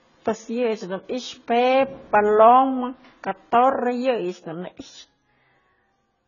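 Speech, and it's been squeezed hard the whole way through: everything above 7 kHz is simply gone, so it sounds dull, and there's a watery, warbling smear on sustained sounds with a fizzy edge on the sibilants. That's classic AAC compression, most likely AAC-LC at a very low bitrate, somewhere around 16 kbps, where the encoder drops the top end and leaves holes in the spectrum it can't afford to code.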